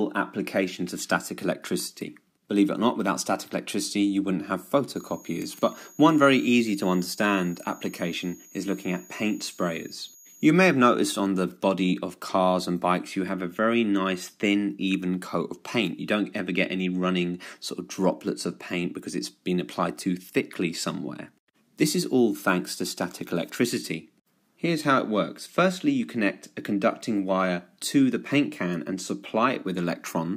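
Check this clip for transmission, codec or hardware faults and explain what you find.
There's one hardware fault here: a switching supply whistle from 4.95 s to 10.50 s. It's a thin high tone sitting somewhere around 7 kHz, wandering between 6.61 and 6.78 kHz, roughly 25 dB under the programme. A switching power supply is either dropping into an audible burst mode or beating against another supply nearby, and that tone leaks into the audio path.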